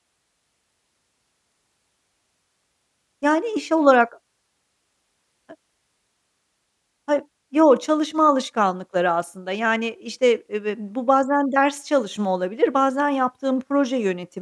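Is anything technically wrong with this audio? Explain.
No, nothing in this speech recording is technically wrong.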